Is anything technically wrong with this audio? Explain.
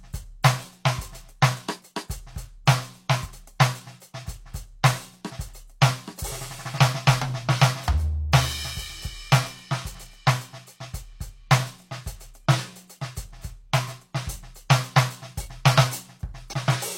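Yes. Compressed frames skipped at 3.21–3.27 s and again at 16.49–16.54 s. Whole blocks of the encoded music never reach the output, either missing from the file or rejected by the decoder as damaged, so playback jumps forward: around 50 ms (about one frame) at the first spot and around 100 ms (about two frames) near the end, which fits a frame length of roughly 46 ms.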